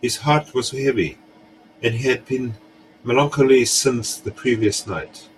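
A speech clip with a Bluetooth SBC bit pool drop from 3.67 to 5.28 s: the treble dulls and gritty noise rises, which points to the bit pool falling from 28 to 12, near 96 kbps. A spectrogram shows the upper bands emptying and speckled noise filling below.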